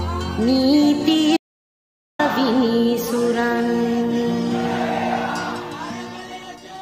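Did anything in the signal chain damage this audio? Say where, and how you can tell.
Yes. There is an audio dropout to silence from 1.37 s to 2.19 s, where the sound cuts off mid-flow and returns just as abruptly about 0.82 s later. The gap is dead digital silence with no room tone or noise floor underneath, so nothing in it came from the microphone. That points to the input stage: the source was likely lost through a disconnected device, a failed link or a momentary mute while the recorder kept writing zeros, and whatever sounded in that stretch is gone.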